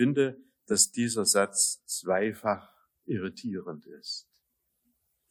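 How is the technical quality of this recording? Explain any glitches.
No glitches can be heard anywhere in the recording. There is nothing to explain, as the audio runs without any technical fault.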